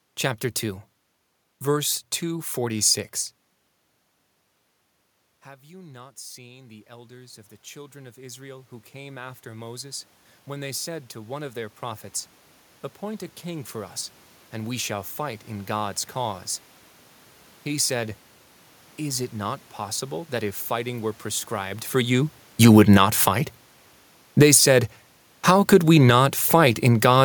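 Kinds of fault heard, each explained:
Automatic gain rising: From 5.44 s to 16.49 s the speech and the room noise behind it swell together, slowly climbing by about 17 dB over roughly eleven seconds. The level had fallen by about 22 dB when the talker moved back from the microphone around 3 s. The gain control heard that quieter input and raised its gain step by step to compensate, lifting the background along with the voice.
Automatic gain falling: Just after "fighting were prescribed for", at 21.98 s, the speech sinks steadily with its background by about 8 dB until 27.2 s. The talker had moved at the microphone around 21.5 s. The gain control responded by gradually turning its gain down, so the voice and the room noise behind it fade together over several seconds.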